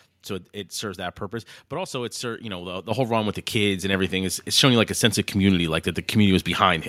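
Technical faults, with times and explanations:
2.91 s and 3.93 s: microphone volume stepped up, after "you know the the" by about 8 dB, then after "with the kids and" by about 4 dB. Voice and background jump together in a single step rather than a gradual automatic-gain swell.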